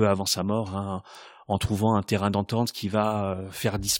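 Listening closely to the speech, nothing stood out as a technical problem at any point.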